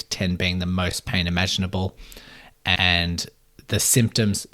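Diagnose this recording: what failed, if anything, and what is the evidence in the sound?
The fault is repeated frames at the codec stage, in storage or transmission of the compressed stream. The speech stutters twice. First, at 0.91 to 0.93 s, between "being the" and "pain imaginable", a 20 ms slice plays a second time. Then, at 2.75 to 2.87 s, a 120 ms stretch plays again, which points to a run of six 20 ms frames. Each block was decoded twice, adding 20 ms and then 120 ms to the running time.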